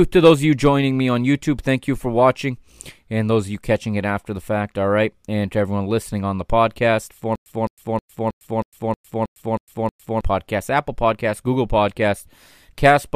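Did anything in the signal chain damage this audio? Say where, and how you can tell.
Yes: stutter with silent gaps, 7.35 to 10.21 s. A 211 ms fragment repeats nine times, each followed by 106 ms of silence, likely from a stalled playback buffer.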